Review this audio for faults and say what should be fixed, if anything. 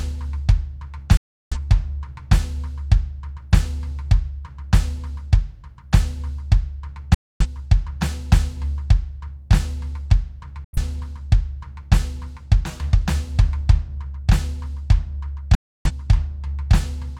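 The music mutes in four digital broadcast dropouts, at 1.17–1.57 s, 7.14–7.46 s, 10.64–10.78 s and 15.55–15.91 s. The receiver silenced corrupted frames with a 3 ms fade. Unlike a pause, the programme resumes further along, with its content lost. A stronger signal or better antenna placement would prevent it.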